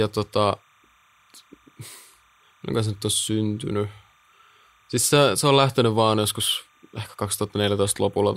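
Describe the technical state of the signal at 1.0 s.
Timecode bleed is present at 1.0 s and runs through the whole clip. Linear timecode at 30 frames per second is leaking in from a nearby track or cable, its square wave flipping between tones near 1 and 2 kHz, heard as a faint chirping warble roughly 40 dB under the speech.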